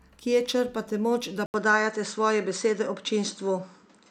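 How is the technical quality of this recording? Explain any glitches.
The speech has one clear fault. At 1.46 s, after "črpate moč da", the input likely switched to a poorer device. An 80 ms gap follows. Then nothing above 8.5 kHz passes, so the sound turns dull, shifts level by about 5 dB, and gains faint new noise.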